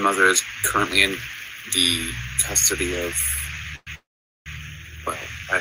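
The audio has two call audio freezes, at 3.75 to 3.89 s and 3.95 to 4.48 s. Each holds the last sound as a fading buzz, the second going silent for about 450 ms. The likely cause is delayed packets emptying the jitter buffer. Unlike a dropout, the sound resumes where it stopped, with nothing missing, and is simply pushed later by about 0.11 s and 0.51 s.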